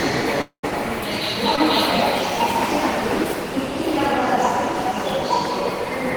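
From 0.41 to 0.65 s, the sound stops. A fading buzz carries on, then goes quiet before the audio resumes, likely a long network dropout losing about 220 ms.

At 1.56 to 1.59 s, a short concealed packet loss leaves a brief smear. About 20 ms failed to arrive and was patched from the preceding sound.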